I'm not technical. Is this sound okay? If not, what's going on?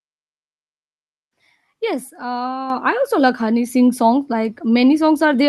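No. At 2.70 s, just before "I also like", there is a microphone volume step-up. The calling software decided the microphone was too quiet and turned its input level up all at once instead of gradually. You hear everything get noticeably louder in an instant, the voice and the background noise together. From that moment on, the rest of the clip stays at the new, higher level.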